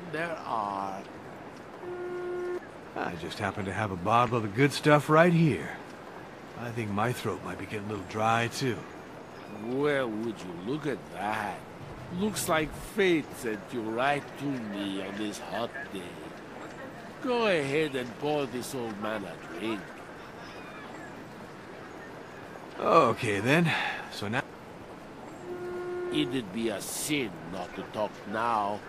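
No technical faults can be heard anywhere in this audio. Nothing in the sound points to a problem in the chain that captured or carried it.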